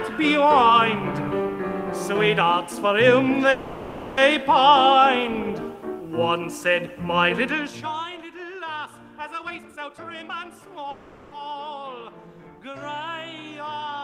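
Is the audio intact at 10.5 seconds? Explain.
No. A jitter buffer speed-up runs from 9.41 to 10.85 s. Short pitch-period slices are cut to drain excess delay, so the sound plays about 142% fast at unchanged pitch.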